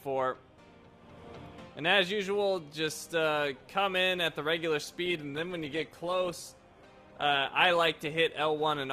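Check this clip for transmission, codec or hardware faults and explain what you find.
One transmission fault: a call bitrate drop starting at 5.08 s and running to the end of the clip.

From 5.08 s the sound turns rough and muffled, with a watery, smeared texture and a duller top end. The worst stretch lasts about 1.4 s. The cause is a collapse in the call's bandwidth estimate, which made the encoder code far more coarsely, in a way that fits a fall from about 64 kbps to 16 kbps. The quality does not recover before the clip ends.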